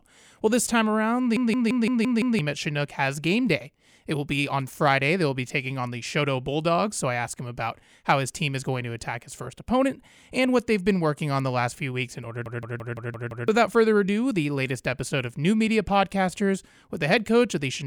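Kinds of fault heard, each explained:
System hang loop: the system stalled while the sound hardware kept cycling its ring buffer, so a 170.67 ms slice of speech repeats six times as a 5.86 Hz machine-gun stutter after "this time around" and "few weeks in order", losing about a second each time.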